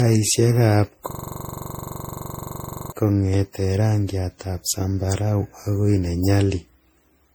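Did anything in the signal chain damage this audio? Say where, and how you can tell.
Yes. The whole clip suffers generation loss, and this is likely a codec-stage problem. The speech sounds swirly, hollow and smeared, more than a single pass at this quality would give. Consonant attacks blur. Each lossy pass re-quantises on a shifted frame grid, so noise and spectral holes pile up. The damage fits roughly seven successive MP3 encodes at around 64 kbit/s.

From 1.11 to 2.92 s there is a system hang loop, at the driver or buffer stage. One 42.67 ms slice of audio repeats exactly, over and over. It loops at 23.4 Hz and produces a rough, rattling buzz in place of moving speech. The driver or system stalled while the hardware kept replaying its ring buffer. The loop length fits a 2048-sample buffer.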